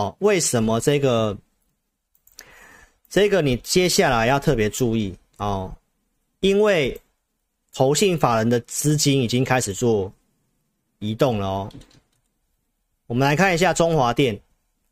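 Nothing in this speech recording stands out as a technical fault at any point, so there's nothing to flag here.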